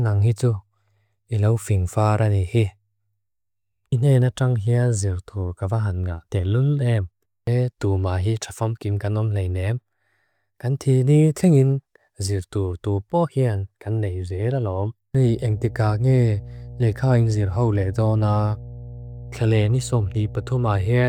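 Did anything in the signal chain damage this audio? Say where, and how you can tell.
Yes. From 15.23 s to the end of the clip a steady low 60 Hz drone sits under the speech, fairly prominent at roughly 15 dB below it, with a buzzy edge from its low harmonics. This is mains hum from the analogue wiring: a ground loop or a nearby transformer coupling the power line into the signal path.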